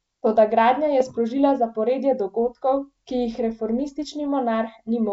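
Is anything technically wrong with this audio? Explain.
Yes. From 1.00 to 1.13 s, after "gradnja je" and before "zaporedje dogodkov ki jih", bit errors on an ADPCM link corrupt the decoder's step size and predictor, causing rough pops and brief level jumps in the G.722-coded speech.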